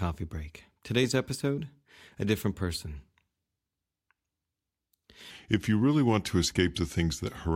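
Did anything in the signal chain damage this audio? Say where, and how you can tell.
Yes. From 5.31 s to the end at 7.55 s there's a section at the wrong speed: the speech drops to about 0.87x, so it drags and sits roughly three semitones lower, pitch and pace falling together. That's likely a playback or edit stage running that stretch against the wrong clock.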